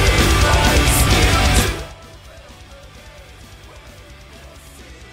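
Nothing stood out as a technical fault on listening.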